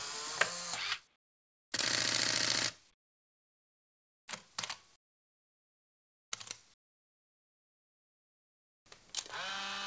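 Discontinuous transmission likely halted the stream whenever the sender detected no activity, and the receiver inserted comfort noise in place of the background. At 1.16–1.72 s, 2.94–4.28 s, 4.96–6.32 s and 6.74–8.86 s, the real background becomes a steady, featureless hiss about 20 to 25 dB quieter.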